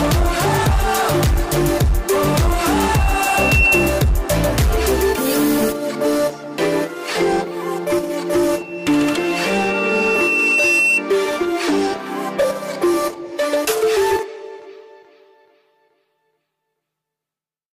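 A single 2.7 kHz tone swells over about a second into a squeal, from 2.74 to 4.14 s, then again over about two seconds from 8.51 to 11.04 s, roughly 5 dB above the sound. This is loudspeaker feedback squeal: the microphone re-amplifies its own loudspeaker. At 10.78 s the audio jumps ahead where compressed frames skipped, a jump of roughly 50 ms that fits two missing frames of about 26 ms each.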